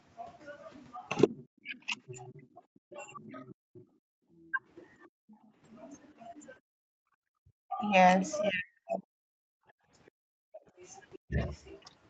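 Speech over a call, with the talker dipping hard from 1.27 to 4.61 s and again from 6.8 to 11.39 s, about 2 seconds lost each time, likely speech suppressed in double talk as the echo canceller ducked both sides. The other side's voice leaks through faintly, roughly 25 dB down, from 1.74 to 5.38 s and 10.06 to 11.82 s, likely residual loudspeaker echo. Background gated by the echo canceller drops the room sound by about 40 dB at 5.07 to 5.53 s and briefly at 9.69 to 9.81 s.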